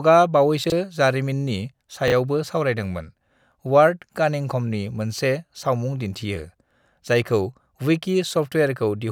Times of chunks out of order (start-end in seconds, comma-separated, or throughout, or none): 0.64-0.72, 2.08-2.12